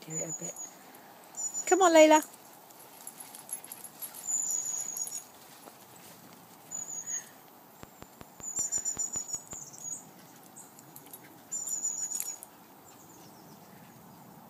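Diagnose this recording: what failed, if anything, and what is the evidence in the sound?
A regular ticking cuts in from 7.83 s to 9.54 s, a train of clicks at about 5.3 per second, around ten in all. The pulses share one shape, keep an even spacing, and peak about 10 dB above the surrounding audio. Identical, evenly spaced impulses that are unrelated to the programme point to something outside the signal. The likely stage is the analogue wiring or interface, with nearby equipment coupling interference or a struggling device injecting pulses.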